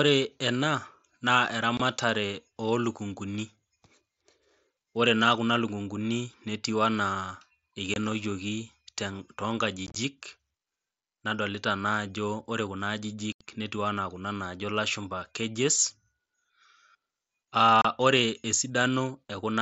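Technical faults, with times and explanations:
1.77–1.80 s, 7.94–7.96 s, 9.87–9.96 s, 13.32–13.41 s and 17.82–17.85 s: unconcealed Bluetooth headset packet loss. Wideband mSBC voice packets between headset and phone went missing, and silence replaced them without repair, leaving hard-edged holes. Most gaps last 22.5 to 30 ms. At 9.87 s, 52.5 ms of loss scatters over 90 ms, giving a chopped crackle. At 13.32 s, an 82.5 ms dropout falls just before "netiu ana kuna najo". The 7.5 ms steps fit mSBC packet timing.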